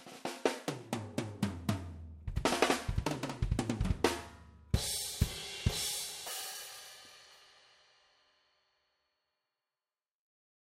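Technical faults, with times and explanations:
6.03–7.87 s, periodic USB or driver dropouts: you get a steady run of tiny ticks, about thirty of them, spaced every 63.5 ms, so roughly sixteen a second. Something on the bus or in the driver stalls on a fixed schedule, and each time a sliver of audio, around half a millisecond, just gets skipped rather than padded with silence. Those little jumps in the waveform come out as clicks, and they only show up where there's sound to cut into.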